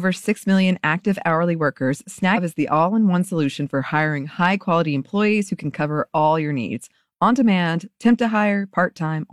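At 2.33 to 2.38 s, between "million active hourly workers" and "is the all in", compressed frames are skipped: about 300 ms of audio is lost, consistent with roughly seven frames of 46.4 ms. Unlike a dropout's silence or an edit's click, time jumps forward.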